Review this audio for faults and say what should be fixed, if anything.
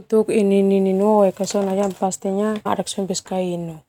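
Stream segment skipped at 2.65 s: the speech jumps abruptly forward with a brief blip, and a stretch of the programme seems to be missing. The likely cause is one segment of the stream failing to load, with playback continuing straight into the next segment. To prevent it, retry failed segment downloads and keep enough buffered ahead that a slow or failed fetch can be recovered before playback reaches that point.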